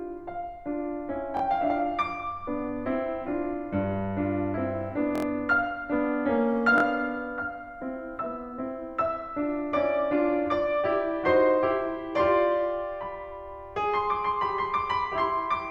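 Repeated buffer at 1.37 to 1.42 s, 5.16 to 5.25 s and 6.78 to 6.83 s: fresh audio arrived late, so the device replayed the same 23 ms slice of music, twice extra at the first and third, four times at the second. This fits a 1024-sample buffer, and each event is heard as a brief hard-edged stutter.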